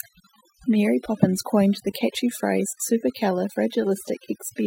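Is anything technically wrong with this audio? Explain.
Yes, two faults run through the whole clip.

Throughout, a steady, raspy mains buzz sits under the speech, roughly 35 dB below it. Sharp switching spikes, from a dimmer, a rectifier or a missing shield, arrive twice per 60 Hz cycle and spray harmonics up into the kilohertz range.

Throughout, the speech also has near-silent gaps that twinkle with small specks. This is overdone noise removal: bands falling near the tool's noise estimate are pushed far down or cut, taking quieter parts of the speech with them.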